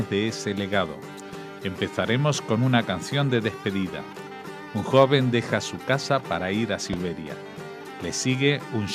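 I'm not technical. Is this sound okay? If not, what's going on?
No, there's one glitch. At about 6.93 to 6.96 s you'll hear a loud pop, a single sharp click that jumps well above the level of everything around it, while the sound itself carries straight on underneath. It's most likely an electrical spike, the kind you get from a cable being bumped, a switch, static, or the audio hardware hiccupping, which slips into the recording as one brief jolt.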